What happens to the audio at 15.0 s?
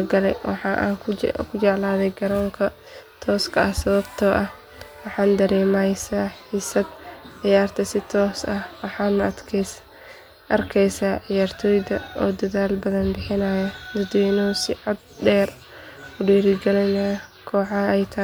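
At 15.0 s the speech continues intact, with no dropout, glitch or other fault.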